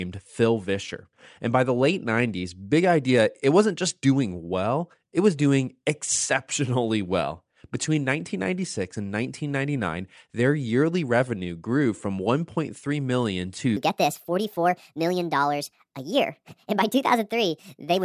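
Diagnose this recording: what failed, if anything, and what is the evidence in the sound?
From 13.77 s to the end, the speech turns high and hurried, running 1.45 times fast and 6.45 semitones sharp. This is a wrong sample rate at playback: unconverted samples clocked out too fast, which fits 22 kHz audio played at 32 kHz.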